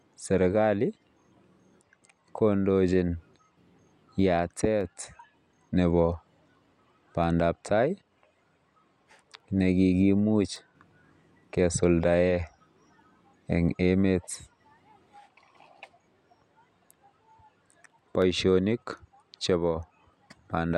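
From 0.96 s to 20.13 s, a click every 1.92 s marks clock drift buffer slips, likely mismatched device clocks; the exact regular spacing distinguishes them from random dropouts.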